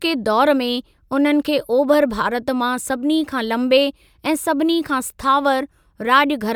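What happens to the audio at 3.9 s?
Nothing goes wrong at 3.9 s; the speech carries on intact through that moment.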